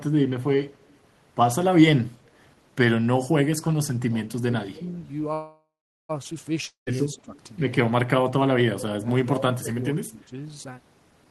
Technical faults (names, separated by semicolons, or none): echo leak; speech suppressed in double talk; call audio freeze; long network dropout